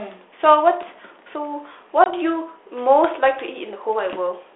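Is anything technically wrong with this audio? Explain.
Yes. Packet loss on an ADPCM call, from 2.04 to 2.13 s: about one 20 ms packet goes missing, leaving a hard-edged silent gap. The decoder's predictor and step size then fall out of step, so the sound briefly resumes distorted before settling.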